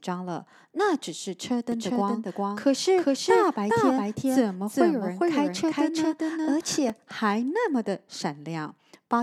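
From 1.72 s to 6.90 s the speech is heard twice: an equally loud, dry copy trails the original by about 0.4 s and cuts in and out abruptly. This doubled audio track likely comes from a second, slower capture path mixed in.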